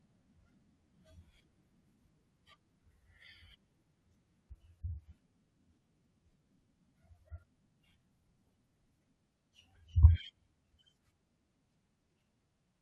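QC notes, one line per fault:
2.24 s, 4.49 s and 7.19 s, damaged data in a compressed stream: three brief blips cut into the speech where corrupted bytes made the decoder misread or reject a frame, lose sync, and glitch briefly while it searched for the next valid header.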